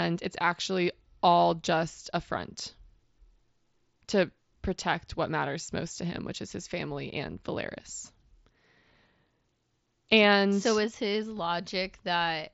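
Nothing goes wrong anywhere in this speech, which comes over a Bluetooth mSBC headset link with its top end stopping at around 7.7 kHz, as that wideband codec does.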